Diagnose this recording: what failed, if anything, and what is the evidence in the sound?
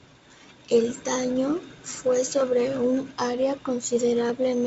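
Nothing in this speech recording points to a failure at any stage. It carries the sound of G.722 wideband telephone coding, with the band ending near 7.7 kHz and at most a faint trace of the codec, which fits the full 64 kbit/s mode.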